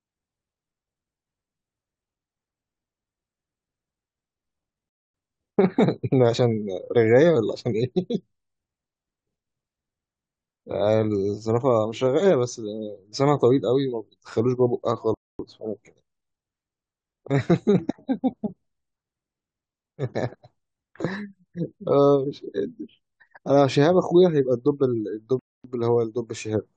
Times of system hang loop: none

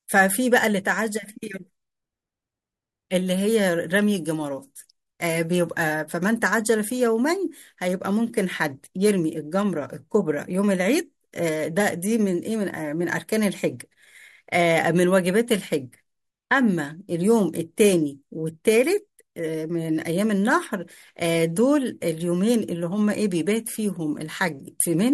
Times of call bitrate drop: none

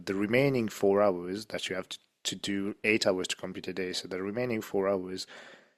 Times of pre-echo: none

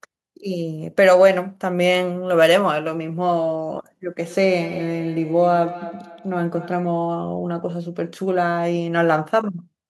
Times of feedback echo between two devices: 4.28-6.98

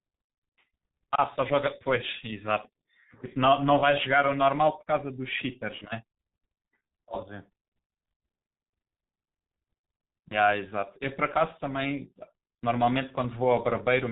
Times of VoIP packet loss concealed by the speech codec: 5.78-5.86, 10.28-10.37

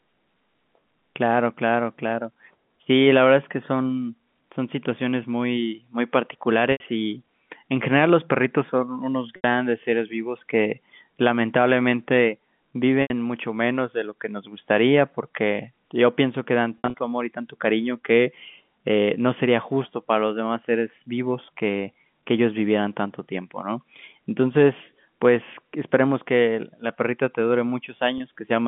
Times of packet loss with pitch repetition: 6.72-6.80, 9.36-9.44, 13.02-13.10, 16.78-16.94, 28.18-28.20

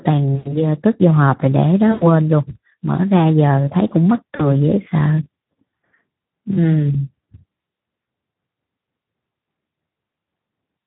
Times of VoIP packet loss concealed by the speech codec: 0.35-0.62, 1.91-2.06, 4.35-4.55, 6.53-6.59, 8.31

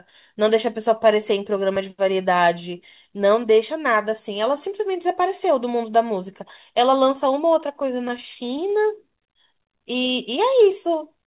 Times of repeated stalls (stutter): 7.60-9.00

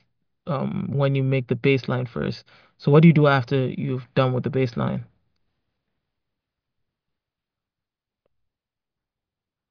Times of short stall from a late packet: none

